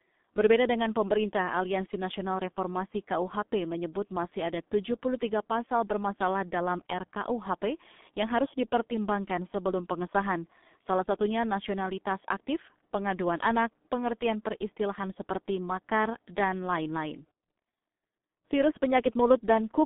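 From start to finish the speech sounds muffled, hoarse and boxy, with smeared consonants and nothing above about 3.7 kHz. That is heavy G.723.1 codec damage: a narrow telephone band coding the voice coarsely in 30 ms frames, which fits a 6.3 kbit/s stream.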